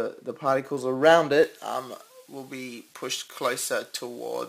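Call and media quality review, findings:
Pre-emphasis left on, 1.43 s to end of clip. Treble lift without matching de-emphasis, likely an unpaired J.17-style emphasis stage in the capture or transmit path. Thin, bright, edgy top end, about 11 dB more at 10 kHz than at 1 kHz. Spectrogram: upper bands visibly brighter from 1.43 s onward, a clear step at onset. Waveform: sharper, spikier transients, with the low-frequency body unchanged.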